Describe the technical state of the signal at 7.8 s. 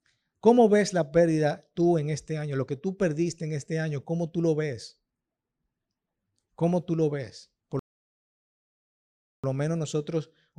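At 7.8 s the speech stops dead in a rebuffering stall that lasts until 9.44 s. The player has run out of downloaded audio and holds at silence for about 1.64 s until more data arrives, then picks up exactly where it left off. No speech is lost, but the delivery gains an unnatural pause. The waveform drops to a flat line across that span, and the spectrogram shows an empty vertical band with abrupt edges.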